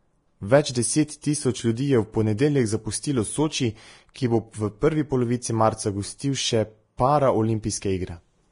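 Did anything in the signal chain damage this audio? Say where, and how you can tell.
Yes. At the codec stage, the whole speech clip was most likely squeezed through Vorbis compression at a low rate, consistent with roughly 31 kbps. Nothing survives above 10.6 kHz, and the remaining treble is coarsely quantised into grainy hiss, so sibilants sound rough and consonant onsets blurred.

The same transform coding leaves pre-echo at 1.21 s and at 6.97 s, just after "polovici marca gostil še". Quantisation noise meant for each sharp onset spreads backward across the block, putting a short hiss about 18 to 19 ms ahead of the attack and softening it.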